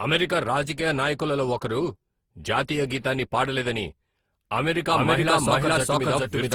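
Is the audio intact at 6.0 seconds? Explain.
No. Generation loss runs throughout, likely from repeated re-encoding with an Opus-type codec. Fresh quantisation on each pass leaves swirly, hollow sound, blurred onsets, and smeared, patchy spectrogram detail.

A doubled audio track also spans 4.92 s to the end, likely a second copy mixed in. It trails about 0.4 s behind at roughly equal level, giving a dry echo and repeated waveform shapes.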